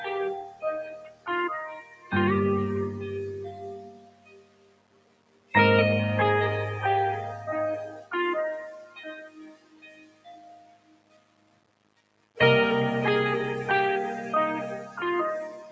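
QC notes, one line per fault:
Throughout: low bit depth without dither. Grainy distortion tracks the sound and sits around 20 dB below it, worsening as level falls. This likely comes from rounding to about 6 bits with no dither, so the error stays tied to the signal.
Throughout: noise suppressor applied to music or sounds. A speech-oriented suppressor treats sustained tones, ambience and tails as noise, so the level pumps and thins by around 20 dB. Attacks pass while held portions sink, giving a fluttering, uneven texture across the clip.
0.43–0.64 s, 0.85–1.28 s, 1.81–2.12 s, 3.78–5.54 s, 8.74–9.02 s, 9.19–12.37 s: sound cut by the noise suppressor. Steady and decaying material is pulled down by about 10 to 17 dB, deepest in the 0.85–1.28 s, 3.78–5.54 s and 9.19–12.37 s spans. Decays end early, and the two long stretches sink in level.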